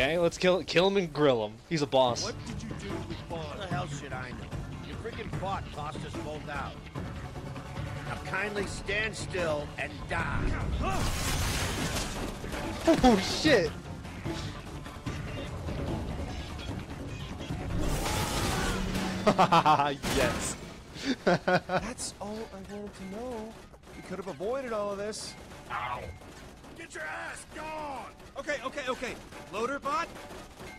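No technical faults can be heard anywhere in this audio. Nothing in it calls for a timestamp or a note.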